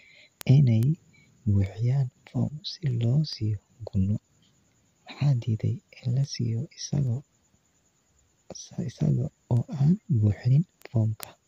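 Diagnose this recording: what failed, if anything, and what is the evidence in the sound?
Sharp little ticks of uneven strength run under the speech from 0.41 s to 11.23 s, recurring roughly every 0.4 s, around thirty in all. These are word clock ticks from the digital interface stage. The receiving converter ran on its own clock, unlocked to the sender's, drifting by something like 50 ppm. At each slip a single sample was dropped or repeated, leaving a brief discontinuity that clicks at this steady rate.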